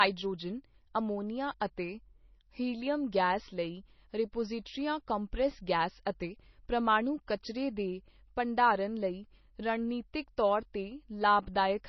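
Throughout the speech the treble ends abruptly at 5.9 kHz, and what remains swirls as weak frequency lines flicker on and off between frames. This is heavy MP3 compression damage, likely from a bitrate near 24 kbps. Unlike plain low-pass filtering, it leaves s sounds chirpy and metallic.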